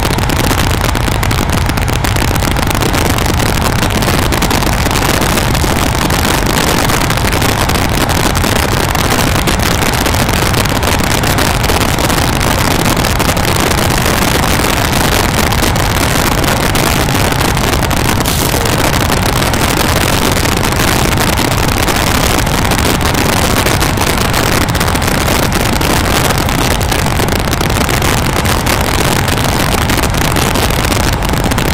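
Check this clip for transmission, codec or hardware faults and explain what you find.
There's one fault here, and it runs the whole way through: integer overflow. The level is pushed about 6 dB too hot, so the loudest peaks, a small share of samples, exceed the integer limit and wrap to the opposite extreme instead of being limited. Each one lands as a harsh, violent crack on loud moments, far sharper and nastier than ordinary clipping.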